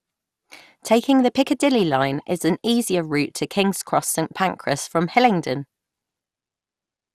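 A speech recording with generation loss running through the whole clip: the sound is swirly, hollow and smeared, and consonant attacks blur rather than snap. The likely cause is repeated lossy re-encoding, around five passes, which fits an MP2 chain at roughly 96 kbit/s. Each pass quantises on a shifted frame grid, so noise accumulates. A spectrogram shows nothing above 15.9 kHz, and softened onsets in the waveform.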